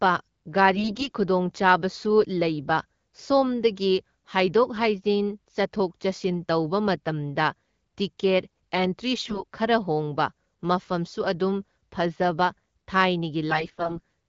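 AMR bit errors hit at 0.74–1.12 s, 9.17–9.43 s and 13.50–14.00 s. Corrupted less-protected bits misplace the excitation pulses, so the speech keeps its pitch and level but turns hoarse and gargly, harsher in the last two bursts.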